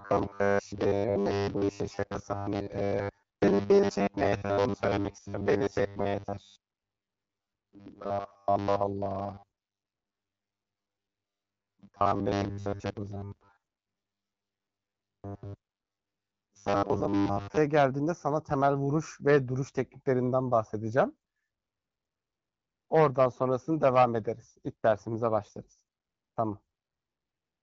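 From 0.01 to 17.57 s there's robotic sound, a stiff metallic 100 Hz buzz, likely from repeated short buffers looping 10 ms chunks in place of most of the audio.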